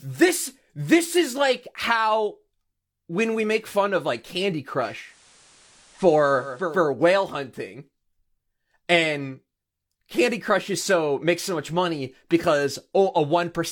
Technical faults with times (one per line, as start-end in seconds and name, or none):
4.77-6.84 digital radio blending to analogue